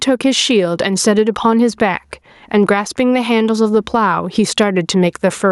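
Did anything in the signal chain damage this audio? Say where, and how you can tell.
Yes. Gain pumping runs through the whole speech clip, with the gain swinging by around 10 dB. Loud and quiet passages sit squashed together. The likely cause is input gain set far too high, with a fast limiter or compressor clamping down on every peak.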